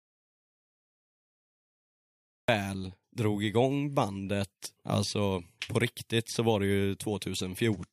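From the very start to 2.48 s there is an audio dropout to silence: plain silence with no room tone, unlike a quiet pause, likely from lost input.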